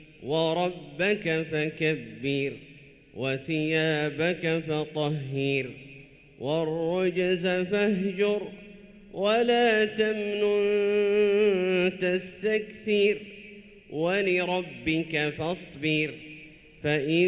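No technical faults can be heard anywhere in it.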